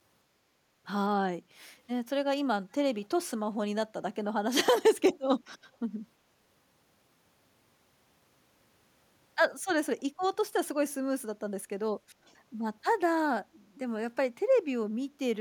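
Echo leak in this speech at 3.02–3.06 s and 5.47–5.52 s: brief, very faint copies trailing the talker by 328 ms, likely from a loudspeaker echo canceller letting residue through.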